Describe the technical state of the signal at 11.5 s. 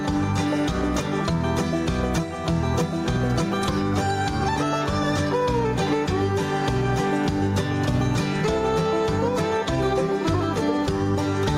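At 11.5 s the gain pumping heard throughout is still present. The gain ducks by about 5 dB under each loud sound. Likely cause: excessive input gain with a fast limiter.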